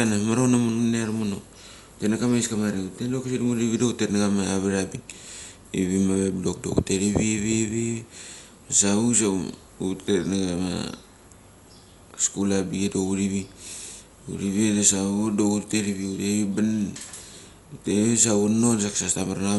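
Throughout, likely Dolby Digital compression at a low bitrate, fitting 64 kbps, removes everything above 11.5 kHz, leaving the speech dull and plainly rough.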